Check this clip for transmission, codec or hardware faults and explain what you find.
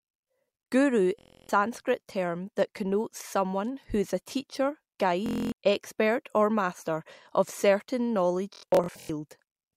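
Bluetooth stutter occurs three times in this speech. The wireless link lost or delayed its audio packets, and the receiver replayed its last short buffer until data resumed. From 1.19 to 1.49 s, about 300 ms is lost before "term that connotes someone". After "who is a teacher", 5.26 to 5.52 s loses about 255 ms before "expert or master of". Each sounds like a buzzing, machine-gun repeat, then the speech jumps ahead. After "or master of certain", 8.54 to 9.10 s scatters about 370 ms of dropouts, the longest about 93 ms, into broken stuttering.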